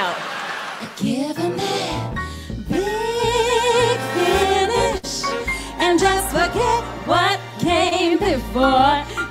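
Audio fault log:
4.97 to 5.05 s, burst of packet loss: about 60 ms of audio never arrived in time, so the receiver stretched the last good sound across roughly 58 ms, fading it as the gap ran on, then picked up again further along. What sets it apart from a short concealed loss is the length: the held, dimming tail is long enough to hear as a stall, and the material that should have filled the gap is simply gone.
7.89 to 7.93 s, short concealed packet loss: only about 20 ms failed to reach the decoder, and the receiver covered roughly 18 ms by extending the preceding sound and then blending back into the real signal. At this length it comes across as a quick smear or wobble where the join sits. Unlike the burst at 5 s, the continuity barely breaks, so a brief transient in that spot may be lost without any obvious gap.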